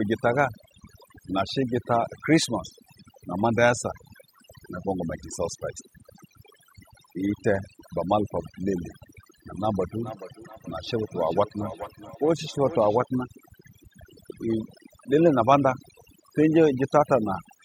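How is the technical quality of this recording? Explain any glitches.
The quality takes two hits: heavy-handed processing across the whole recording, plus a stretch of looping echo in the middle.

The overdone noise removal runs from start to finish. Someone set the noise reduction too aggressively, so any frequency band sitting near its noise estimate gets pushed way down or switched off, and the softer parts of the voice vanish along with the noise. You hear a near-dead background full of little twinkling specks.

From 9.85 s to 13.08 s there's feedback echo between two devices. Two devices in the same room were on the call, and one played back what the other's mic sent. That mic caught the playback again, and neither echo canceller could remove sound coming from the other device. Each bit of speech returns at an interval of roughly 400 ms, getting thinner and more ringing with each pass, and peaks at about 16 dB below the speech.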